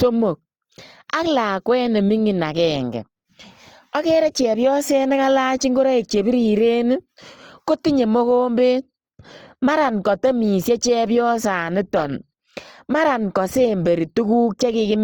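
From start to finish the speech carries plainly audible damage that is likely Opus compression, and the sound fits its music (CELT) mode at around 24 kbps. Each band keeps its overall energy, but when bits run short the finer detail is filled in with noise or copied from lower bands. Voiced sounds turn rough and grainy rather than swirling or watery as with MP3, since few spectral holes open up. Bandwidth stays full, reaching about 20.3 kHz, so nothing sounds muffled.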